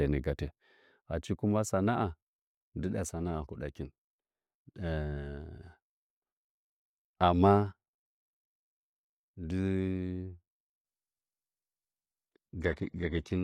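A connection slowdown forced the adaptive stream to a lower bitrate for the final stretch of this speech clip. From 10.85 s to the end at 13.43 s, playback jumps without any gap to a much thinner encoding, with nothing left above 14.8 kHz. The treble drops away, and codec artefacts rise. That sound points to a switch from an AAC-LC stream at around 96 kbit/s to a low-rate HE-AAC version near 16 kbit/s.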